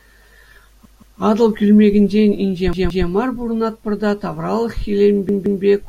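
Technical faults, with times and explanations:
0.85–1.20 s, 2.73–3.07 s and 5.29–5.63 s, repeated buffer: fresh audio arrived late, so the device replayed its last 171 ms block, which fits an 8192-sample buffer, twice more. The same speech fragment sounds three times with hard joins, giving a stutter, and then continues with essentially nothing lost.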